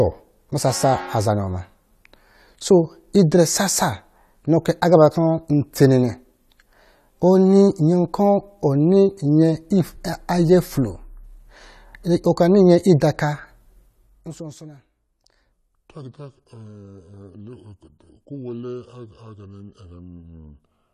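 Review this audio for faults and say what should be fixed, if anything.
From 15.52 s to the end of the clip, the speech abruptly drops to a deeper, slower delivery, with pitch falling about five semitones and everything stretched out. This is a section at the wrong speed: the passage plays at 0.714 times its recorded rate, so speed and pitch fall together. The likely cause is that this segment was rendered or played against the wrong clock, such as a sample-rate mismatch during editing or export. To prevent it, confirm that every segment's sample rate matches the project and output rate before joining and rendering.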